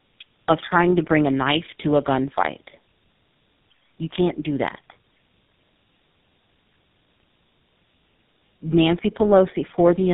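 Speech running throughout with tandem speech coding. Decoded and re-encoded through two speech codecs in a row, it sounds rougher and more warbly than any single coder would. It is muffled, with nothing above 3.8 kHz, which fits an AMR-NB link feeding GSM full rate.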